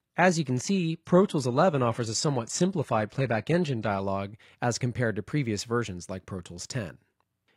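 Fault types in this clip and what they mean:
Adaptive stream starting at a low bitrate: the player grabbed a cheap, low-quality version first so playback could start right away, then switched up once it had a read on the connection. For the first 4.0 s the top end is thin and sounds synthesized, with stronger codec artefacts, which fits a roughly 20 kbit/s HE-AAC stream. At 4.0 s it jumps cleanly, no gap, to something like 96 kbit/s AAC-LC, though even then nothing reaches above about 14.9 kHz.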